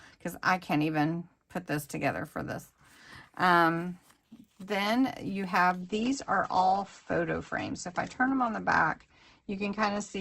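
At 5.82 s the audio abruptly switches to an adaptive stream at a lower bitrate and stays degraded to the end. The treble vanishes above about 8.2 kHz and codec artefacts thicken, which points to a drop from roughly 64 to 16 kbit/s Opus. Unlike packet loss, there is no gap or stutter, only a sudden, sustained loss of quality.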